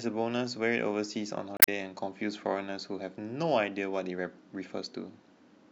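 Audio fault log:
1.56 to 1.68 s, damaged data in a compressed stream: a short glitch of about 120 ms breaks into the speech. Some bytes in the stream were bad, so the decoder lost sync and jumped to the next readable frame.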